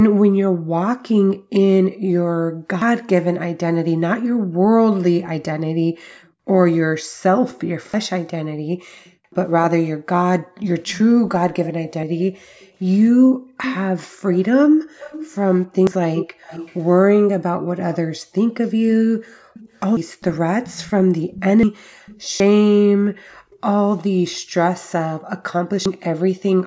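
A speech recording over a call path, where the echo canceller kept pulling the microphone down hard while the far-end loudspeaker was active, so the background is gated by the echo canceller from 0.09 s to the end. The room tone dips, at its deepest by about 40 dB, then swells back when the canceller releases. These gaps add up to roughly five seconds, giving the background a pumping, hole-punched quality. Separately, at 2.82, 7.94, 12.03, 15.87, 19.97, 21.63, 22.4 and 25.86 s, the capture software likely failed to collect its samples before the hardware overwrote them, a dropped buffer (overrun). Each time, a piece of audio vanishes and the two sides butt together with a jump in the speech rather than any silence. Most losses are around 150 ms, while the one at 21.63 s is closer to 400 ms. Between 6.23 and 23.59 s there is an echo leak, likely with one side's echo canceller not fully removing what its microphone picked up from the loudspeaker. 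A delayed copy of the speech returns about 380 ms behind the original, roughly 15 dB down, heard as a faint repeat trailing the talker. The call microphone processing's high-pass filter takes out the lowest bass, which is normal.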